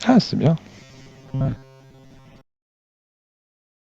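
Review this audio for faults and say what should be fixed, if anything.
From 0.8 s to the end of the speech, the voice turns into a robotic sound, like repeated short buffers. It becomes a rigid, metallic buzz fixed near 133 Hz, though the words are still roughly followed. The likely cause is audio arriving too seldom, so a tiny slice of about 7.5 ms is replayed to fill the gaps. For most of that stretch, repeats stand in for skipped audio. Fix the delivery path with a larger jitter buffer or steadier input scheduling.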